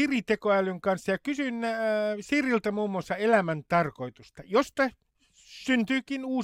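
Nothing stood out as a technical fault on listening to the speech in this recording.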